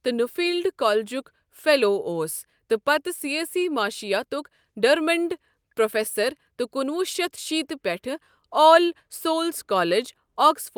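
No technical faults can be heard in this recording.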